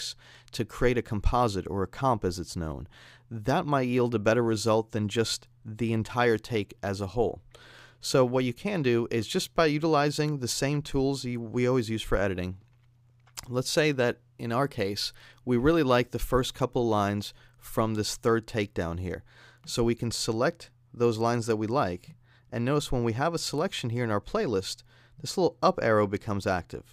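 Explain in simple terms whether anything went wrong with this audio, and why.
Nothing went wrong here; no faults can be heard.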